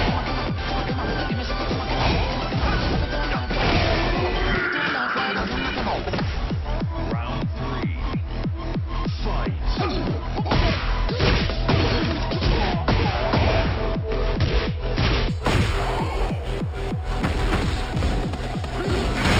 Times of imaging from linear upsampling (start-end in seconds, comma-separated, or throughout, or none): 15.29-19.40